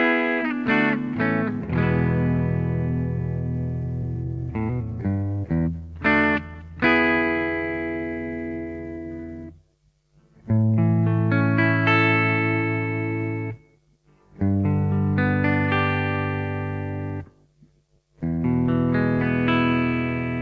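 The audio shows clock drift between sender and receiver: the sender's clock runs roughly 4 percent fast, so the receiver's jitter buffer keeps overfilling and must discard material. This shows up as repeated timing corrections, unevenly spaced short cuts heard as small hiccups or an unsteady tempo. They run at 104 percent speed from 0.21 to 10.71 s, 108 percent from 13.51 to 14.64 s, and 109 percent from 17.48 to 18.39 s. The band stops at 8 kHz, which fits a G.722 call path at 64 kbps.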